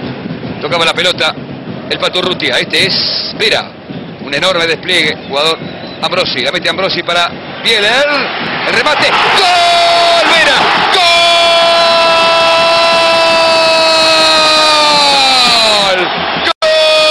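No technical faults can be heard anywhere in the signal.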